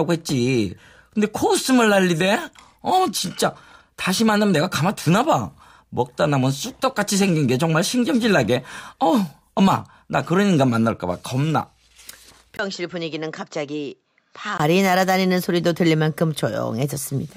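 From 12.57 to 14.60 s, after a 20 ms gap, the speech dulls, losing everything above 7.6 kHz and dropping about 10 dB: likely an input switched to a poorer device.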